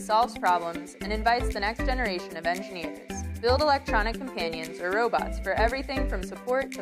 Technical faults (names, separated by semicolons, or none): none